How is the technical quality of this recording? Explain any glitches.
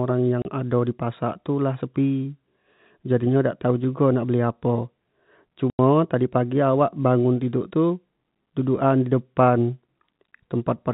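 Two dropouts from packet loss filled with silence break the telephone-band (G.711) audio: a 30 ms hole at 0.42 s just before "ado di", and a 90 ms hole at 5.7 s, pointing to 30 ms packets. The receiver substituted silence for the missing data, so each gap cuts off abruptly with hard edges.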